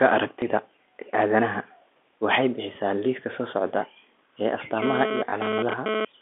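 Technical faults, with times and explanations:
0.40 s and 5.30 s: packet loss with last packet repeated. At each point one 20 ms stretch of sound went missing and the previous 20 ms was played again in its place, so each gap is heard as a small blip rather than a silence.
4.82 to 6.05 s: GSM phone buzz. A nearby 2G handset transmitting data in bursts about 217 times a second induced a raspy, harmonic-rich buzz at about 8 dB below the speech, entering and dropping out irregularly with the data traffic.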